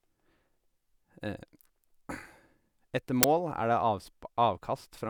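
At 3.23 s, an uninitialised buffer bursts out as loud digital noise for about 11 ms. Stale memory was played, which fits a 512-sample block.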